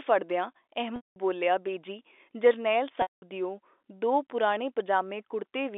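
At 0.96–1.16 s and 3.02–3.22 s, the second between "ਬੇਜੀ ਜਰਨੈਲ" and "ਦਿਓ ਦੋ", packet loss with pitch repetition replaces 200 ms each of narrowband telephone-coded speech with a repeated pitch period fading to silence.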